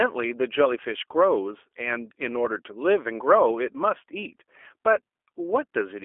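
It's a speech clip run through the G.729 codec from start to finish, and the damage is easy to hear. The sound is squeezed into a phone band of roughly 300 Hz to 3.4 kHz, with a rough, slightly synthetic edge that fits 8 kbit/s G.729A.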